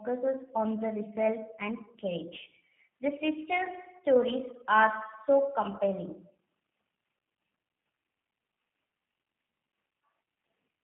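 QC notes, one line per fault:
Throughout, G.729 codec. The speech has been squeezed through a low-bitrate telephone codec, most likely G.729A at 8 kbit/s. Each short frame is rebuilt from a vocal tract filter, a pitch predictor and a few pulses. That model gives the voice a rough, slightly synthetic edge, and the damage is plainly audible. The line band runs from about 150 Hz to 3.4 kHz, so the sound is thin and muffled, with no air on top.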